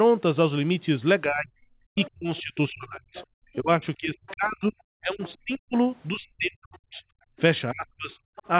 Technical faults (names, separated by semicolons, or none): speech suppressed in double talk; other side's voice leaking through; background gated by the echo canceller